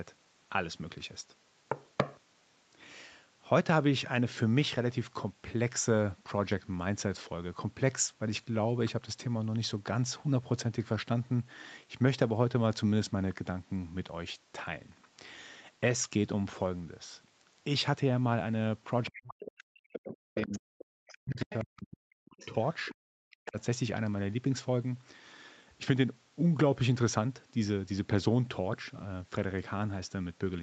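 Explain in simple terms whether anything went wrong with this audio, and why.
Between about 19 and 24 seconds, two related things go wrong. Both most likely come from a call's echo canceller struggling while both people talk at once.

The other side's voice is leaking through in short, faint scraps at 19.05–19.45, 20.11–20.59, 21.13–21.63, 22.39–22.95 and briefly at 23.45 s. The one at 20.11 s is the loudest. This is a second voice from the loudspeaker getting in, not a fault in the main talker's own sound.

The main talker's speech is suppressed in double talk from 19.07 to 22.54 s and again at 23.26–23.58 s. The voice drops away almost to nothing in pieces, overlapping the leaked scraps. That overlap is what sets it apart from an ordinary dropout or a loose connection.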